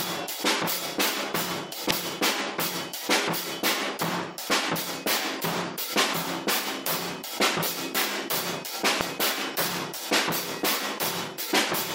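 Damaged data in a compressed stream at 1.90 s and 9.01 s throws the decoder out of sync as it hunts for the next valid frame, leaving a brief blip in the sound each time.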